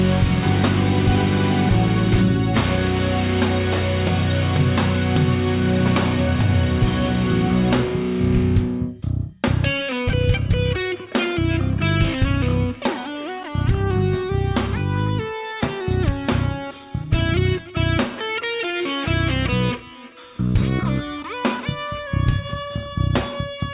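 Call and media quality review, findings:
No faults found in this recording. Nothing in the audio calls for a ticket entry.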